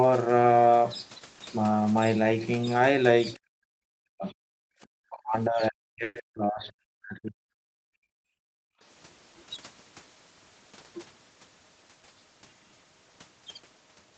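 Speech that dips sharply or cuts out in pieces at 3.35, 3.6 to 4.39, 4.82 to 7.38, 7.7, 7.95 and 8.52 s, falling by about 40 dB at worst (a shallower 15 dB or so at 3.35 s). This is likely speech suppressed in double talk, with the echo canceller turning down the talker while the far side spoke. Inside that stretch, from 6.03 to 6.18 s, a brief fading buzz or hiss fills about 120 ms before the speech resumes where it left off, pushed later with nothing lost, likely a call audio freeze from delayed packets. All of this sits within the 8 kHz band of the call path.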